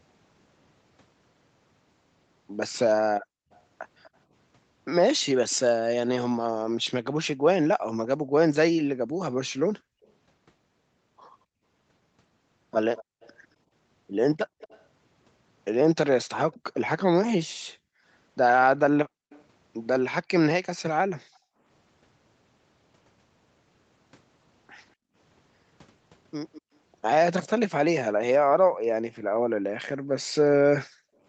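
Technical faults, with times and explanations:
3.2–3.51 s, 7.79–10.04 s, 13.07–21.64 s, 24.96–25.15 s and 28.7–31.24 s: background gated by the echo canceller. While the far end's loudspeaker played, the canceller clamped the mic down hard, about 40 dB at worst (about 33 dB at 25 s). The room tone dips out in bursts, totalling from a fraction of a second up to roughly a second and a half per stretch.
3.53–5.56 s, 10.06–19.44 s and 26.53–27.6 s: echo leak. There's a faint delayed copy of the speech trailing about 205 to 242 ms behind, sitting about 25 to 30 dB under the main signal. Most likely the canceller on a loudspeaker end didn't fully scrub its mic pickup and sent the residue back.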